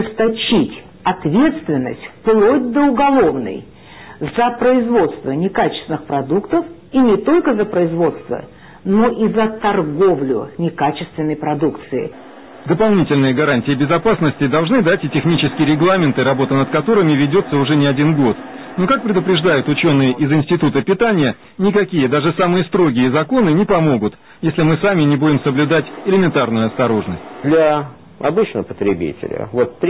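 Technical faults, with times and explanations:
No technical faults can be heard anywhere in this audio. There is nothing here that calls for a time or an explanation.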